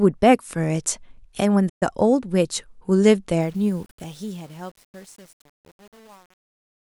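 At 1.69 s the speech drops out to silence, and the gap runs to 1.83 s. That is about 121 ms with nothing coming through. This is a playback stall: the player was likely starved of data or its thread was blocked, so the output went quiet until it recovered.

From 3.41 s to the end, the quiet tail of the speech sounds gritty and grainy. From 3.70 s onward it is at its worst. This is truncation distortion on a fade: the level stage kept only 8 bits with no dither. As the fade approached the smallest step, the waveform collapsed into a few coarse square steps.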